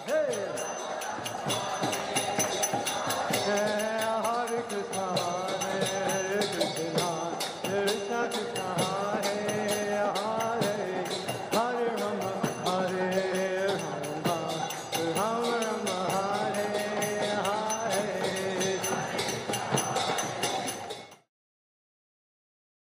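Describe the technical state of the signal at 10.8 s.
At 10.8 s the signal is intact, with no audible fault at that moment.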